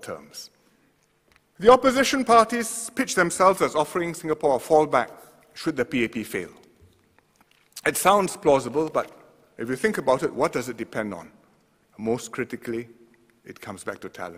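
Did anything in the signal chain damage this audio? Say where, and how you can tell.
No, nothing in the signal chain damaged this audio.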